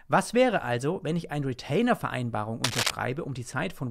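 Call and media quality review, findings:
Cable scratch noise, 2.64–2.90 s: dense, uneven rustling bursts roughly as loud as the speech. Likely a worn cable or connector moved, shifting contact resistance.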